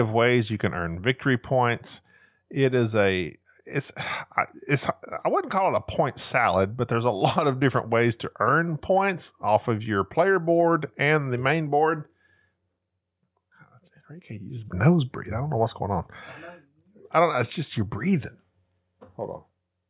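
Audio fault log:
The speech signal holds steady throughout, with level, timing and tone showing no disturbance at any point.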